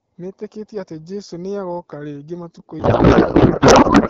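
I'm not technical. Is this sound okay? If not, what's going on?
No. From 2.79 s to the end, the speech turns into garbled noise and warbling that barely follows it. This is a codec payload misread: the HD Voice data was packed one way but unpacked another. Unlike a dropout, sound keeps coming, only scrambled.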